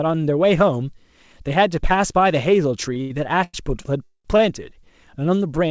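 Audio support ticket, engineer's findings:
Short stall from a late packet at 2.94 s, 3.02–3.12 s, 3.44–3.56 s and 4.37–4.41 s: the jitter buffer ran dry and the last sound was held, 16 to 97 ms, with no audio lost.

Call audio freeze at 4.04–4.27 s: about 210 ms inserted, a fading buzz or hiss ending in 70 ms of silence, likely from packets held up in transit emptying the jitter buffer. Playback resumes where it stopped.

Content stops at 8 kHz, which fits G.722 at 64 kbps on the call path.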